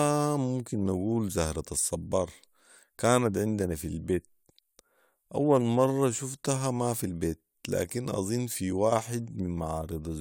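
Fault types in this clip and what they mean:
No technical faults can be heard in this speech recording. There is nothing to list under any fault type.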